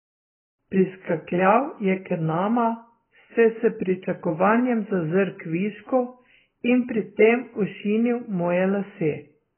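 From start to finish the speech is band-limited, with nothing above about 3.1 kHz. It sounds muffled and dull. Sibilants lose their edge and turn into a smeared, fizzy hiss. Sustained vowels warble. The likely cause is heavy AAC compression at a low bitrate, which fits something near 12 kbps. At that rate the encoder drops the upper band entirely. It then quantises what remains so coarsely that gaps and swirling artefacts appear.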